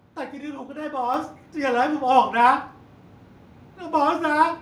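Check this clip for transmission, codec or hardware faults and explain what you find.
There's one fault here: the microphone volume stepped up at about 1.14 s. The call software seems to have judged the input too quiet and bumped the mic gain by about 6 dB in a single jump, so speech and background noise get louder together, abruptly.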